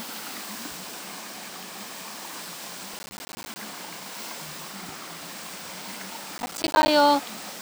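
The processor repeatedly misses its audio deadlines in this recording of everyday sounds, causing processor overload crackle from 2.94 to 3.56 s and from 6.38 to 6.88 s. Many dropped buffers, consistent with blocks of around 10 ms, leave hard-edged silent gaps heard as gritty crackle.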